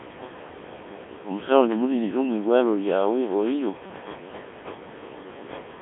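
Speech clip passed through a Codec 2 vocoder for its whole length. The voice is rebuilt from sine waves, sounding heavily robotic and buzzy within a 200 Hz to 3.6 kHz band, at a rate of about 1.3 kbit/s. Room noise sits about 20 dB below the speech.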